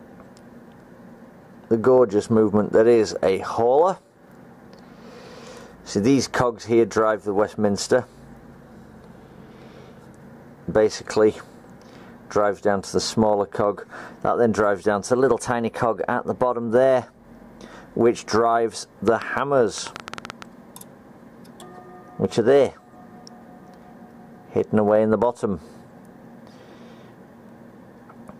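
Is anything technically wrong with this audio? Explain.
Yes. From 8.67 to 10.19 s there is a drift correction step, likely clock-matching software adjusting the playback rate in one jump to manage its buffer. Speed drops 5.63% and pitch falls a full semitone before snapping back. A second step from 15.12 to 16.68 s runs 5.63% fast, raising pitch by about 95 cents.

From 19.08 to 20.43 s a train of clicks, likely from interference or a faulty connection, adds around ten similar pops at an uneven pace of about 8 per second. They stand well above the sound, roughly 10 dB louder.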